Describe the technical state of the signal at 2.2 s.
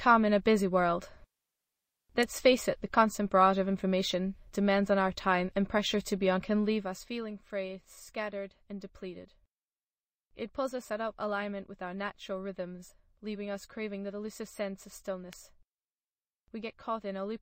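A sharp, brief snap sits on top of the sound at 2.23 s, lasting only a few milliseconds. This is an electrical switching spike, likely a nearby switch, motor or static discharge arcing and the audio line picking up that burst of interference.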